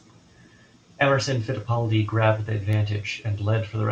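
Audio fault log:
No audible faults anywhere in this speech recording.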